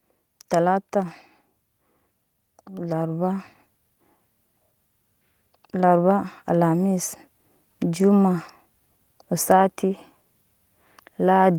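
From 2.68 to 3.52 s, and again from 5.72 to 7.96 s, automatic gain rising lifts the speech and background together by about 4 dB as the gain control responds to quiet input. The waveform envelope and spectrogram noise floor brighten in a smooth ramp.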